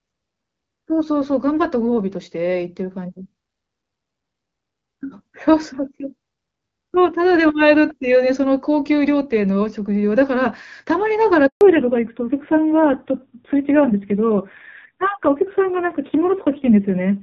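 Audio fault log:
11.47–11.61 s, handover gap: the sound cuts out for about 140 ms, fading within a few tens of milliseconds and sitting in dead silence before picking up again. That's the call being passed from one network to another. While the link switches over, no speech frames get through, so there's nothing to decode, and whatever was said in that stretch is simply gone rather than smeared or glitched.
11.61 s to the end, fallback to narrowband: right after the gap, the top end disappears and nothing above 4 kHz comes back. The call has dropped from HD Voice to an older narrowband codec. Before the switch you can hear the wideband AMR-WB link, sounding like its 12.65 kbit/s mode with just light coding damage. Afterwards the voice goes dull and a bit rough, which fits AMR-NB at around 5.9 kbit/s.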